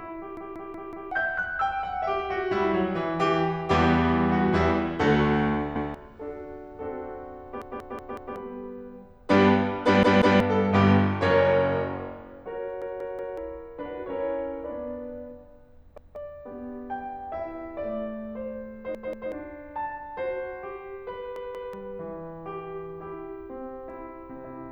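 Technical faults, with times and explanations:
0.37–1.12, 5.76–5.94, 7.62–8.36, 10.03–10.40, 12.82–13.38, 15.98–16.16, 18.95–19.32, 21.36–21.73 s: repeated buffer. The same 186 ms chunk of music (fits an 8192-sample buffer) replays one to four times with hard joins, stuttering; the waveform and spectrogram show identical repeating blocks with sharp edges.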